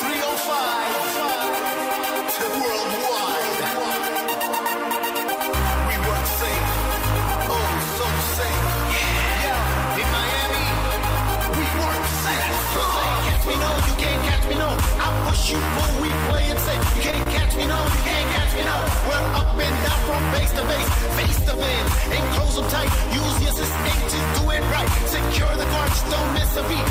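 The audio briefly hangs at 17.11–17.15 s and 17.23–17.28 s: short stalls from a late packet. The jitter buffer emptied, so the last sound was stretched 20 ms, then 30 ms, with nothing lost.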